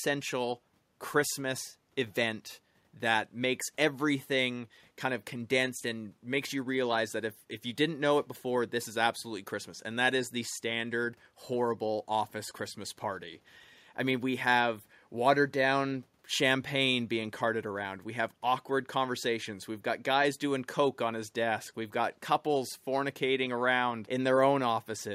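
Nothing technical stands out in this speech recording; there's no fault to point to anywhere in it.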